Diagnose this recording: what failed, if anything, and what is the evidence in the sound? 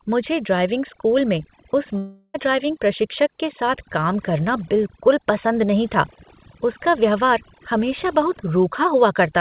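Overdone noise removal in call processing, throughout: bands near the noise estimate are pushed down or out, leaving a lowered background that breaks up into twinkling specks.

From 1.98 to 2.36 s, a fading buzz or hiss and then 30 ms of silence replace 360 ms of lost speech, likely a long network dropout with concealment.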